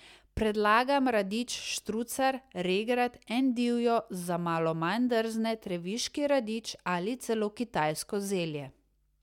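No technical faults can be heard anywhere in the speech.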